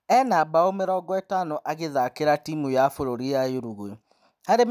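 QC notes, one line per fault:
No fault found in this speech clip.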